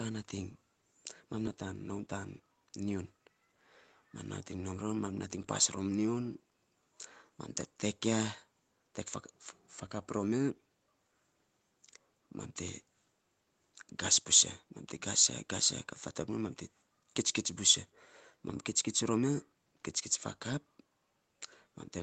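A jitter buffer speed-up runs from 1.91 to 2.88 s. The receiver's buffer had built up more audio than its target, so to shed the excess delay it cut out short stretches of one or a few pitch periods in quick succession, about a tenth of a second in all. The speech here plays about 10% fast with its pitch unchanged, sounding briefly rushed, while the faint room noise, about 51 dB below the speech, continues underneath.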